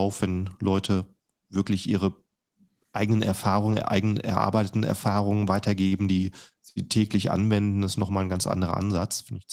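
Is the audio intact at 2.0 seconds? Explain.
Yes, at 2.0 seconds the speech is intact, with no audible fault at that moment.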